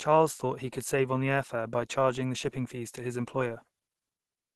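All the way through, the speech has a muffled, hoarse, grainy quality, and the top end stops short of full band. That's Opus compression, likely running in its hybrid speech mode at a starved rate around 16 kbps, with the damage plainly audible.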